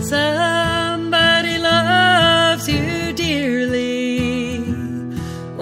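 At 0.91 to 0.98 s the audio holds one sound slightly too long, with a slight buzz or dip, which is a short stall from a late packet. A packet missed its playout time, the jitter buffer ran empty, and the receiver stretched the last sound by about 35 ms until the packet arrived. Playback then resumed where it left off, so nothing is lost, but everything afterwards runs 35 ms later than before.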